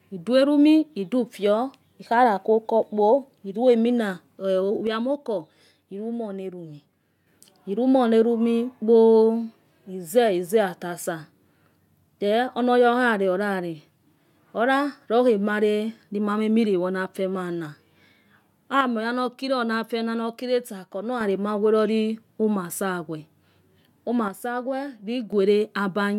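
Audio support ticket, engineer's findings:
Speech level steps down abruptly by about 6 dB at 4.87–7.27 s, 18.81–21.21 s and 24.28–25.33 s, then snaps back. Likely one channel drops out: with one side of the stereo pair lost, the mono sum keeps only half of the common signal, and anything unique to that side vanishes. Distinct from a gain ride or fade because the edges are instant with no ramp, and from a full dropout because the sound never goes silent.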